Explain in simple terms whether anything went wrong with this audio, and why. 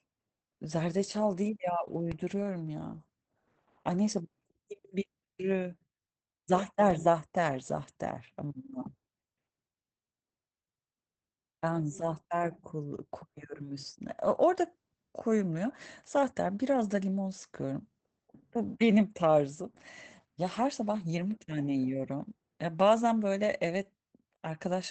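Two things went wrong. The whole recording carries Opus voice compression at a low setting. The coder rebuilds speech from a simplified model of the voice and drops everything above about 8 kHz, so the voice sounds muffled, slightly hoarse and a little robotic from start to finish.

There is also a DC step. At 2.12 s the waveform's resting level suddenly shifts, then shifts back at 6.90 s. Each jump is heard as a low thump or click, while the speech itself carries on unaffected.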